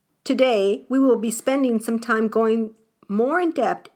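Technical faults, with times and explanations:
No technical faults can be heard anywhere in this speech recording, and the signal holds steady from its opening to its close.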